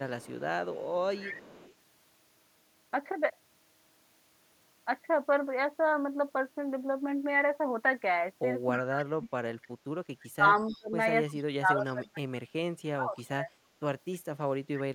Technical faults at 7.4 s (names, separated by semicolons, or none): none